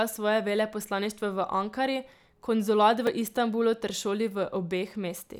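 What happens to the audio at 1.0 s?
Nothing goes wrong at 1.0 s; the speech carries on cleanly through that point with no dropout, click or distortion.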